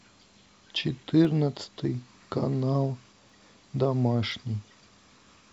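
A speech recording with periodic USB or driver dropouts: roughly every 1.02 s, from 0.23 s to 5.34 s, about a millisecond of audio is lost and replaced by silence, heard as a regular tick over the speech. The even spacing points to a background task stalling the audio driver or bus on a fixed timer. In the waveform, each event is a tiny silent gap; on a spectrogram, a thin vertical broadband line.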